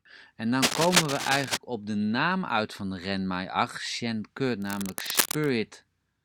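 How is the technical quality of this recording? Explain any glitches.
The speech is marred by two bursts of cable scratch noise. From 0.62 to 1.57 s, just before "op de naam uit", and again from 4.60 to 5.49 s, dense, uneven scratching sits over the speech, first about as loud as the voice, then somewhat quieter. A worn cable or connector being moved is the likely cause, its contact resistance fluctuating rapidly.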